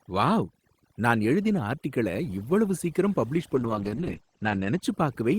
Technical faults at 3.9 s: overdone noise removal; call bitrate drop

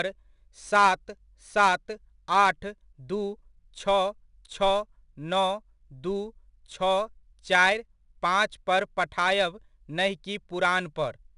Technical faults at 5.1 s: 4-bit ADPCM compression

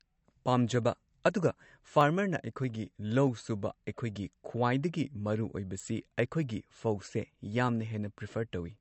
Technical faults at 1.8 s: MP3 compression; clock drift buffer slips

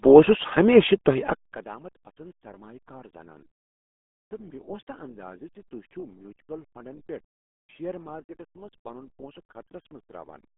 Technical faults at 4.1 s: RealAudio 14.4 codec

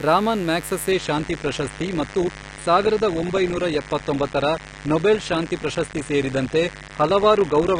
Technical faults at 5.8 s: mains buzz; adaptive stream at a lower bitrate

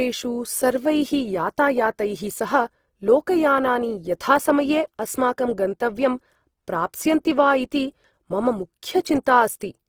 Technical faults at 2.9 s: Opus compression

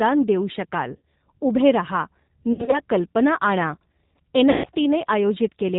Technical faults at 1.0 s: G.729 codec; VoIP packet loss concealed by the speech codec

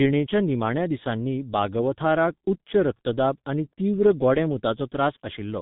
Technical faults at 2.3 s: G.723.1 codec

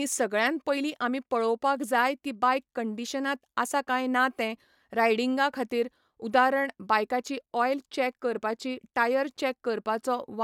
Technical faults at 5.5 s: none

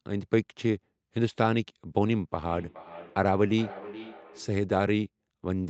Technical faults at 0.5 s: none

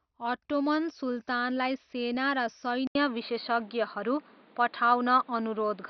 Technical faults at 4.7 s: MP2 compression; input switched to a poorer device

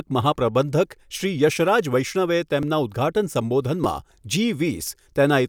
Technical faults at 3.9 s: repeated buffer

